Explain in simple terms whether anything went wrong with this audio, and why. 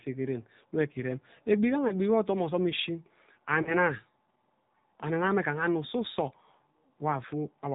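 AMR narrowband mobile codec, throughout: the speech passed through an old mobile-phone codec that cuts everything above 4 kHz and rebuilds the voice from a simple model, leaving it muffled and buzzy.

Lost AMR speech frames, at 1.88 to 1.93 s and 3.62 to 3.75 s: transmission errors destroyed one frame, then two in a row, so the decoder patched the gaps from the last good sound, causing brief dips or warbles.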